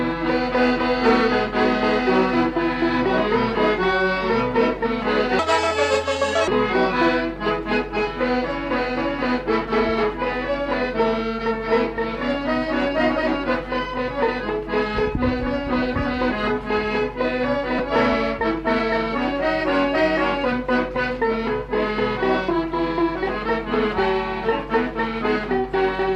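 Playback clocking went wrong between 5.39 and 6.48 s, most likely because that stretch was run against the wrong clock, so it plays at 1.72 times its original speed. Because speed and pitch move together, the section jumps up by roughly ten semitones and sounds rushed and squeaky before snapping back to normal rate. Later, the audio suffers lost LE Audio frames at 17.79 s and again at 23.45 s. Each gap lasts 10 ms, which fits a single dropped LC3 frame. The decoder covers it by reusing the previous spectrum with scrambled signs, so each spot becomes a brief noisy smear rather than a clean dropout, too short to fade toward silence. The light perceptual coding underneath leaves at most a faint watery texture on noise and attacks.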